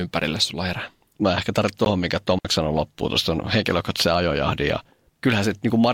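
It's a speech clip with two short holes. Right after "ehkä tarvitsen", at about 1.85 s, the sound cuts out for roughly 14.5 ms and resumes as if it had played on, most likely a Bluetooth dropout, which fits a single packet missing its deadline. Then from 2.39 to 2.45 s there's a digital wireless dropout: a clean 60 ms mute with no noise burst on either side, just before "sanoi loppuun tuosta henkilökohtaisen", where the receiver shut off after losing too much data.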